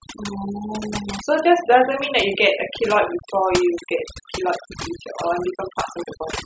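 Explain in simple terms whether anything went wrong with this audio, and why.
A noise reduction tool was pushed too hard, causing overdone noise removal that runs through the whole recording from start to finish. The tool cut out any part of the sound it judged too close to background noise, and it took the quieter parts of the speech along with the noise. Between phrases the background drops and breaks up into twinkling, warbling specks.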